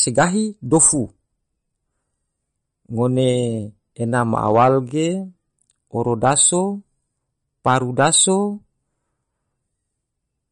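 Throughout the recording the speech carries plainly audible codec damage, likely from MP3 compression. Nothing remains above 10.5 kHz, and a watery, swirling texture hangs on the sibilants, with attacks smeared, which fits a bitrate near 40 kbps. The encoder ran short of bits, cut the treble at a fixed point and dropped weak frequency lines that flicker between frames. The flickering sets it apart from a simple low-pass filter, which dulls the top end without any swirl.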